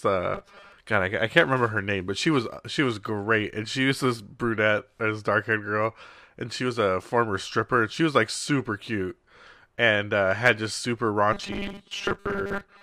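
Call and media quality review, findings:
Rigid metallic buzz over the speech, fixed pitch near 200 Hz, still loosely tracking the talker: 0.34 to 0.72 s, and again 11.33 to 12.83 s through the end of the clip. Robotic sound from repeated short buffers, likely jitter-buffer underrun concealment. Audio arriving too seldom, so a roughly 5 ms segment is looped; period sets the 200 Hz pitch. About half the signal in these spans is repeats, with the real audio skipped.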